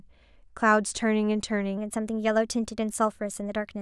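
A wrong sample rate takes hold at 1.77 s and lasts to the end of the clip. From that point the samples run through playback faster than they were captured, with nothing converting between the two rates, so timing and pitch shift together. The speech becomes about 1.09 times faster and roughly 1.5 semitones higher, sounding slightly hurried and raised. The ratio fits material recorded at 22 kHz being played back at 24 kHz.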